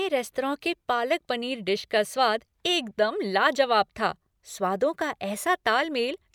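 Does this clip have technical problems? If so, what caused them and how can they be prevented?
No, nothing stood out as a technical problem on listening to this clip.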